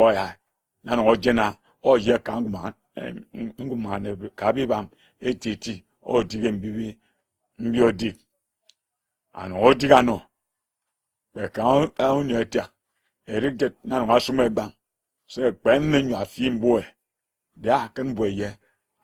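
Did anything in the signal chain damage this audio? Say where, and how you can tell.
Yes, at the codec stage, for the whole 19 seconds of speech. It sounds swirly and hollow, with smeared consonant attacks, more than a 48 kbit/s Opus stream would explain alone. That's likely generation loss from about seven re-encodes, each re-quantising and piling up noise.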